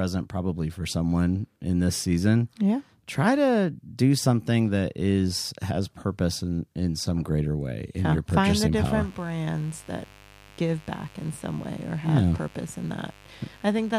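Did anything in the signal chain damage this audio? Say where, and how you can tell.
Yes: mains buzz enters in the analogue wiring from 8.76 s to the end, a raspy 50 Hz buzz roughly 25 dB below the speech. Its sharp switching-spike harmonics distinguish it from smooth, tonal hum.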